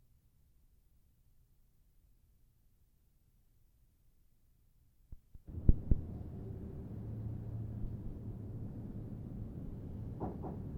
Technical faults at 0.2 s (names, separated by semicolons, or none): doubled audio track